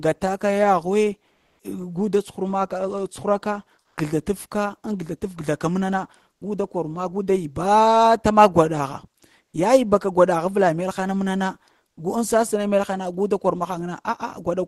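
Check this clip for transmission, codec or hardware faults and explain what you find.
There are a few short discontinuous-transmission artefacts in this speech, all heard through a call codec whose top end stops around 12 kHz, with coding noise consistent with roughly 20 kbps Opus.

Comfort noise in place of the background at 1.33–1.59 s, 9.45–9.53 s and 11.89–11.97 s: the sender likely went quiet on Opus DTX, and the receiver filled in synthetic hiss. The background sits about 50–57 dB down, but you can hear it turn smooth and featureless, about 5 dB louder in the first patch and about 6 and 9 dB quieter in the later two.

Sound dropped by the voice detector at 3.79–3.97 s: the detector likely mistook part of the sound for background, so about 70 ms of sound is lost and 180 ms is replaced by steady noise.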